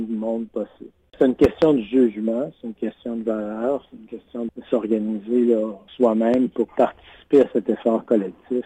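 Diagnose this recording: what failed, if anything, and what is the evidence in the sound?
Loud pops at 1.44 to 1.65 s and at 6.34 to 6.37 s. The first is a double pop, two sharp thumps in quick succession standing well above the sound, roughly 15 dB over it. The second is a single shorter pop, around 10 dB above. The sound carries on unbroken beneath both. The likely cause is a sudden voltage step in the analogue wiring stage, from a connector, switch or static discharge, which the following circuits shape into a brief pulse.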